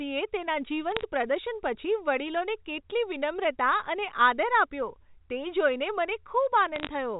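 Speech on a telephone line, with two short bursts of bit errors on a digital phone line. They crackle from 0.92 to 1.03 s, just before "પ્રદર્શન પછી વડીલોને કેટલી", and from 6.76 to 6.87 s. Flipped bits, around a fifth of a percent, corrupt single samples, and hits on high bits make sharp ticks.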